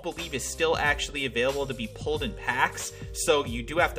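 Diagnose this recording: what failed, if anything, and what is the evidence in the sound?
The converter's clock is the culprit: sample clock jitter across the whole clip. There's a grainy hiss riding on the louder, brighter passages that drops away in the quiet bits. Timing wobble around a microsecond leaves error roughly 40 dB under the signal.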